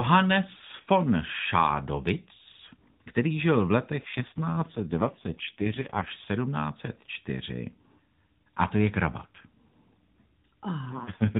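AMR rate drop at 4.02–6.12 s, right after "který žil v letech", and again at 10.86 s to the end of this speech recording. The voice turns buzzier and more synthetic without losing band or going silent, consistent with the AMR-NB link falling from around 12.2 to 4.75 kbps to protect a weak connection.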